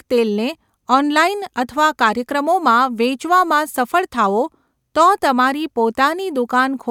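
Nothing stood out on listening to this recording; no technical fault could be heard at any point.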